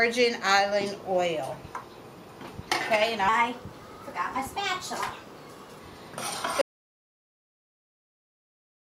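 From 3.29 s to 5.79 s there is a section at the wrong speed. The audio runs 1.12 times too fast. Pitch rises by about two semitones and everything sounds hurried. Both shift together. This is likely playback on a mismatched clock.

At 6.61 s an audio dropout to silence begins and runs to the end. The sound stops abruptly. Nothing follows, not even room tone, only silence. The likely cause is a lost input while recording continued.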